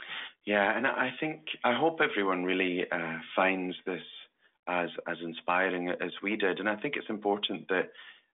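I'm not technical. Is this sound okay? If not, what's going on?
Yes, no faults can be heard.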